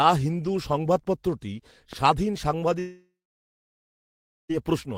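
At 1.93 to 1.95 s a single loud pop sits a few decibels above the speech, which carries on underneath. It is likely an electrical pulse from a plug, switch or static, shaped into one thump. Unlike a dropout, nothing is removed.

From 2.79 to 4.51 s comes a long network dropout, likely lost packets. About 1.7 s of speech never plays. The last sound is stretched into a fading buzz, then roughly 1.4 s of silence follows before speech resumes further on, unlike a brief glitch.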